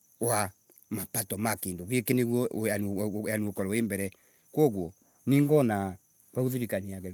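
No technical faults can be heard anywhere in the speech.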